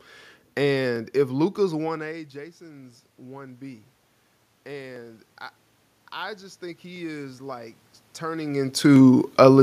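From 1.82 to 3.91 s, automatic gain rising: the level control reacts to an input that has dropped by about 20 dB after the talker moves back around one and a half seconds in, and lifts its gain by about 4 dB over two seconds. The voice and the room noise swell up together. The same happens from 6.16 to 9.11 s, a rise of about 6 dB that again brings up the background along with the speech.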